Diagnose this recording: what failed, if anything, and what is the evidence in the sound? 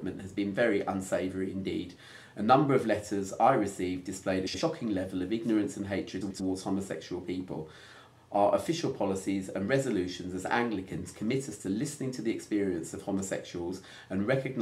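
Frames out of order at 4.47 to 4.61 s and 6.21 to 6.41 s, in the network stage. Each stretch plays with its two halves swapped, blocks of about 70 ms and 93 ms, which fits runs of three and four frames. This causes a garbled flutter, and no time is lost.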